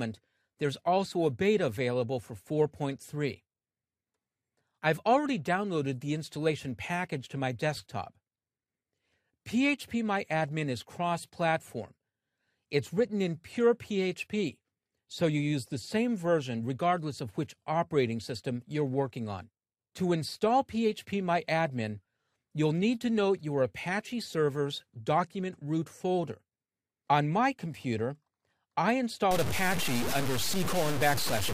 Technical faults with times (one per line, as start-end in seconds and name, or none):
29.31-31.53 low bit depth without dither